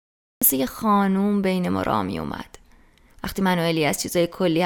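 The recording or stream began late, so there is a cut-off start: the first 0.42 s is digital silence, and at 0.42 s the speech begins abruptly in the middle of a sound, with no natural attack or fade-in leading into it.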